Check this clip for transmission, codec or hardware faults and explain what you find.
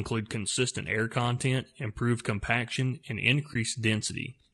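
Two faults can be heard in this speech clip.

Throughout, the speech has a rough, grainy texture, with noise filling the gaps between harmonics and an upper band that sounds thinned or synthetic. The codec damage is plainly audible. The likely cause is low-delay AAC compression (AAC-ELD, the codec used for video calls), at a rate that fits about 32 kbps. At that rate the coder cannot spend enough bits on each frame's spectral lines, so quantisation noise spreads between harmonics and the top band is approximated rather than coded.

From 3.53 to 3.56 s there is a brief dip in the sound, faded out and back in rather than cut sharply. This is AAC frame loss with muting, and it fits a single lost frame of about 20 ms. The decoder replaced the missing frame's spectrum with zeros. Because AAC frames overlap, the neighbouring windows taper into and out of the silent frame, which softens both edges of the gap.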